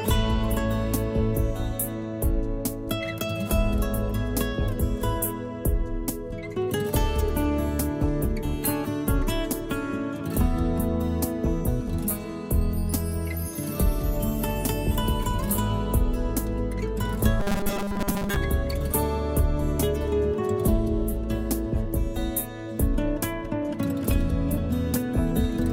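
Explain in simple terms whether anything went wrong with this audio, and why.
From 17.40 to 18.36 s the sound turns into a stiff, metallic buzz: robotic sound from repeated short buffers. The likely cause is new audio arriving too slowly, so the software keeps replaying the last tiny slice, about 5 ms long, to fill the gap. Most of that stretch is repeats rather than real audio. Those rapid repeats stamp a fixed 200 Hz drone onto the sound, which still loosely follows the original underneath.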